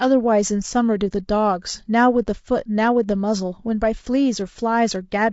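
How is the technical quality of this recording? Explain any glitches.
The speech carries plainly audible codec damage for its whole length. Low-delay AAC compression, present throughout, is the likely cause: its short frames resolve the voice's pitch harmonics poorly, and at a rate that fits about 32 kbps the sound turns rough and grainy, with noise between harmonics and a thinned, synthetic-sounding top band.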